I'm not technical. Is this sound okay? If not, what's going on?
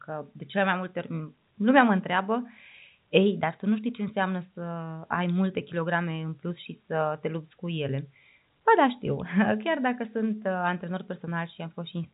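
Yes, nothing is wrong with this speech clip. It comes through ordinary G.711 telephone coding, which is why it has the familiar phone-line sound with nothing above 3.8 kHz.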